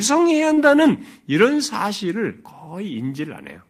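From 0.53 to 0.59 s the speech briefly smears, with a short stretch that sounds held over rather than freshly spoken before the voice blends back into the real audio. This is short concealed packet loss: about 40 ms of the call arrived too late for the decoder, so the receiver improvised roughly 36 ms of replacement sound by extending what came just before, then crossfaded into the next audio that did arrive.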